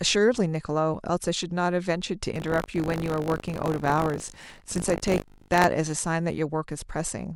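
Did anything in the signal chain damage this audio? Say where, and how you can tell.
Yes, at the driver or buffer stage. From 2.34 s to 5.66 s the speech carries a steady robotic rattle at 50 Hz, which fits a buffer period of 20 ms. This is buffer tearing. The writing software and the hardware reading the ring buffer have drifted out of step and cross inside each period. A small slice of every buffer replays audio from about 40 ms earlier, with hard joins on both sides, and those repeating joins produce the buzz.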